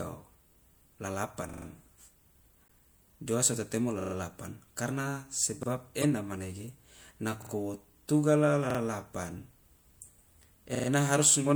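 It's a speech clip with two kinds of fault. There's a repeated buffer stutter at 1.49, 4.01, 5.63, 7.42, 8.70 and 10.75 s, where one chunk of about 43 ms (which fits a 2048-sample buffer) plays one to four extra times with hard joins, because fresh audio didn't reach the device in time. It doesn't seem to lose any audio. At 2.62 s (about 80 ms) and 5.98 s (about 60 ms) you get a short chirp, squeak, blip or burst of noise from a corrupt frame decoded: a few damaged compressed frames were played anyway, so the energy lands at the wrong frequencies.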